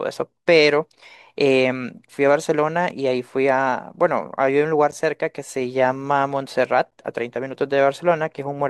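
Gaps between stream segments occur at 0.90, 2.90, 4.91 and 6.91 s, one every 2.0 s as the segment timestamps fail to meet. The player fills each gap with silence, so the speech drops out abruptly for about 3 ms in the first two and about 11 ms in the last two.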